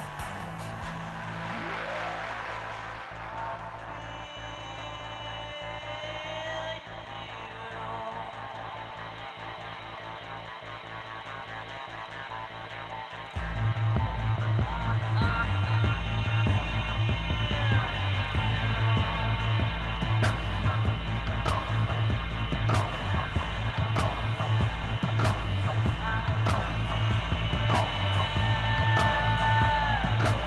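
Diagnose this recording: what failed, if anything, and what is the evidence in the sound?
Nothing failed: the only coloration is the expected sound of the Opus call path, with its high end limited to about 12 kHz.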